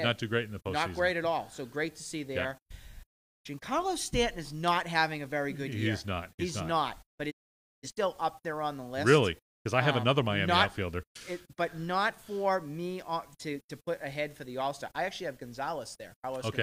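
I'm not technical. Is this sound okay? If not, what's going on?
No, not quite. At about 7.30 seconds the sound fades out very quickly, in roughly 20 milliseconds, and stays silent until about 7.89 seconds. That's a digital broadcast dropout. The receiver stopped getting clean data, either because the signal dropped out or because some chunks arrived damaged, so it muted until good data came back. Whatever was sent in that half-second gap is gone for good, not delayed.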